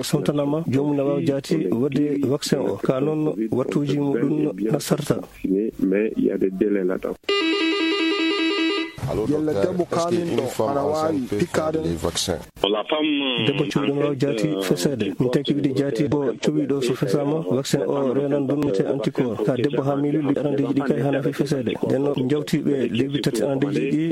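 Five brief glitches break into the audio at 5.21, 16.07, 18.63, 20.30 and 22.76 s. Each lasts roughly 35 to 60 ms. They point to damaged data in a compressed stream, which forces the decoder to resynchronise.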